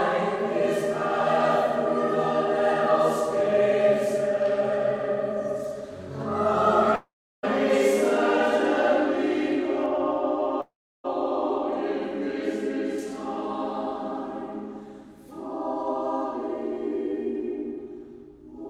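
A long network dropout at 6.95 to 7.45 s, likely caused by packets that never arrived, leaves the last sound trailing off as a fading buzz or hiss for about a tenth of a second. Then comes roughly 0.35 s of silence before the audio resumes, with nearly half a second lost.

De-emphasis applied wrongly from 9.86 to 12.98 s cuts the treble that no pre-emphasis had boosted. The response slopes smoothly down to about 11 dB lower at 10 kHz than at 1 kHz, so this stretch sounds dull and muffled.

Inside that muffled stretch, a second long network dropout at 10.61 to 11.06 s behaves the same way. A brief fading fill gives way to about 0.34 s of silence, and roughly 0.44 s of audio is lost.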